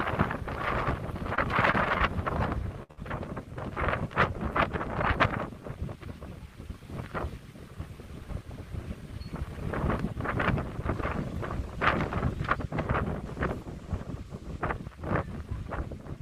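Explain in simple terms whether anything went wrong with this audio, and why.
Short concealed packet loss occurred three times, at about 1.35, 1.71 and 1.98 seconds. Each time, roughly 20 ms of audio didn't arrive in time, so the receiver patched the hole by stretching the last sound. You hear a quick smear or wobble.

A burst of packet loss follows from 2.83 to 2.99 seconds, two back-to-back losses of 60 ms each. The receiver extended the last sound and faded it out, making a brief buzz or hiss. The audio then jumps ahead, with that stretch missing.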